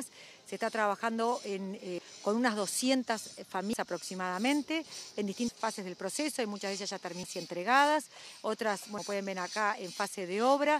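At 1.98, 3.73 and 8.98 s the sound jumps ahead, about a third of a second gone each time, likely audio missing between chunks of 2 s.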